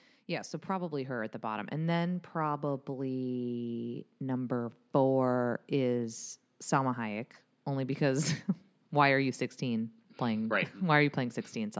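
From 0.66 s to 2.04 s you can hear automatic gain rising. The gain control decided the input was too quiet and eased its level up by about 6 dB over roughly 1.4 seconds. Because it's acting on the whole signal, the speech and the background swell together rather than the voice just getting closer. It comes across as a slow fade-up near the start, on top of the call microphone processing, which caps everything at 8 kHz.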